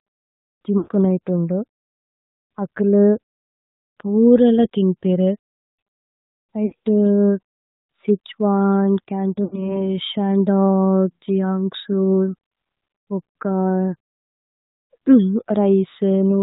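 The whole clip is speech passed through the AMR narrowband mobile codec. Nothing above 4 kHz survives, so the sound is dull and boxy. The codec rebuilds the voice from a vocal tract model fed by sparse pulses. That leaves a plainly audible buzzy, synthetic edge. The amount of damage fits AMR-NB running at about 10.2 kbps.

The first lost AMR speech frames come at 0.78 to 0.89 s. About 100 ms of audio is missing, which fits a run of five frames. The decoder repeats the last good pitch and vocal tract settings at falling gain. The sound stretches and fades toward silence, then returns rough. At 6.66 to 6.74 s, about 60 ms drops out. This is a shorter stretched fade. At 9.44 to 9.81 s, about 80 ms is lost, with the same smeared fade and weak recovery.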